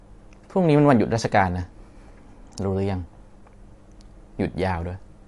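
MP3 compression throughout: nothing above 11.3 kHz, watery swirling on the speech from weak components flickering frame to frame, likely a low bitrate around 48 kbps.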